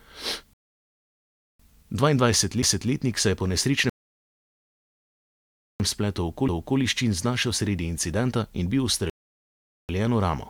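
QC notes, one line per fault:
0.53–1.60 s, rebuffering stall: the speech cuts to silence for about 1.06 s, then picks up right where it left off, as the player waited on more downloaded audio.
2.62 s, CD skip: a tiny tick with a brief mute of a few milliseconds, then the speech jumps, since the laser hopped to another turn of the disc.
3.90–5.80 s, rebuffering stall: the longest gap, about 1.9 s of silence while the buffer refilled, then the speech resumes seamlessly with nothing missing, just time added.
6.48 s, CD skip: another short tick and near-instant mute, followed by a jump in the speech as the pickup landed on a different part of the spiral.
9.10–9.89 s, rebuffering stall: about 0.79 s of silence from the player running dry, then playback carries on from exactly the same spot.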